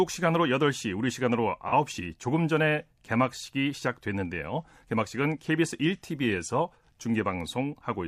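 At 1.68 s to 1.73 s the speech smears into a brief noisy, phasey patch lasting about 43 ms, the sign of AAC frame loss with concealment. The decoder rebuilt the gap from the preceding spectrum, which fits a single lost frame. Unlike a plain dropout, it never falls to silence or clicks.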